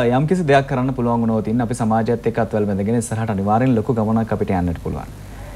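No dropouts, distortion, timing errors or other technical faults can be heard anywhere in the signal.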